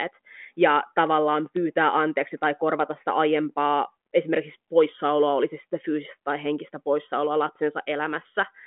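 No technical faults can be heard in the speech, which carries the expected telephone-band character of G.726 ADPCM at 40 kbit/s, confined to roughly 200 to 3400 Hz with nothing above 3.8 kHz and at most a faint trace of coding texture.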